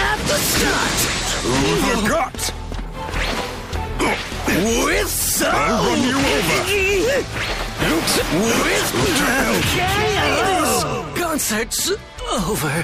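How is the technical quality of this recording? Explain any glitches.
Two compressed-frames-skipped dropouts, at 7.77 s and 9.60 s. Whole coded frames never reach the output, so the audio jumps forward about 70 ms, then about 150 ms, consistent with roughly 26 ms frames. Overlapping frame windows smear each join into a short blip rather than a click.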